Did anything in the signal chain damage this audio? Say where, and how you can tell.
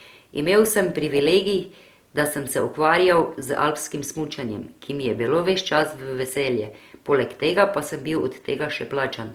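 Yes. Across the whole speech recording the sound has a rough, grainy texture: tonal parts of the voice turn noisy and sandpapery, yet the top end still extends to full bandwidth without obvious swirling or gaps in the spectrum. That points to the codec stage, likely Opus compression in its music (CELT) mode at a low rate, which fits roughly 24 kbps. With too few bits, it keeps each band's energy but fills the detail with folded or noise-like content, so harmonics lose their clean pitch.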